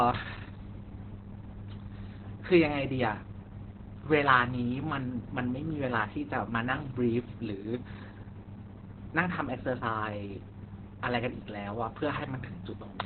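From start to finish, this speech has the sound of heavy Opus voice compression. Nothing gets through above about 4.2 kHz, so the voice is muffled and boxy, like an old phone line. The coder is in its narrowband SILK mode, rebuilding speech from a prediction model with a very roughly coded excitation, and that's what makes it sound hoarse and a bit robotic. The damage points to a very low bitrate, likely around 8 kbps.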